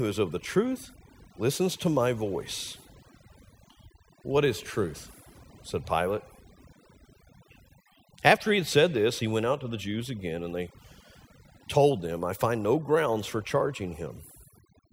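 A speech recording with overdone noise removal from start to finish: bands near the noise floor are cut hard, leaving near-silent gaps with twinkling specks.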